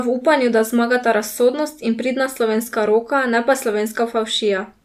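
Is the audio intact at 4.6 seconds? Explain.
Yes, at 4.6 seconds the speech plays through cleanly with no audible fault.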